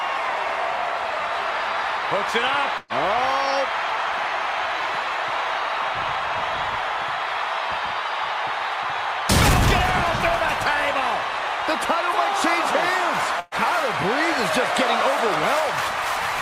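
At 2.77 to 2.93 s and again at 13.40 to 13.54 s, the sound briefly smears into a held, fading sound, then jumps ahead. Each is a burst of packet loss: about 120 ms never arrived, and the receiver stretched the last sound to cover it.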